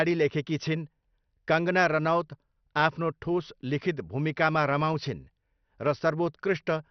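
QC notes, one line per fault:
Throughout, MP2 compression: the speech is dull with nothing above 6.2 kHz, and there is a heavy gurgling, granular roughness. This is likely MPEG Layer II coding at a low rate, which fits roughly 48 kbps. Too few bits switch off the upper sub-bands and leave the lower ones coarsely quantised. A plain low-pass filter would dull the sound without adding this grain, and the flickering bands set it apart from MP3's swirly artefacts.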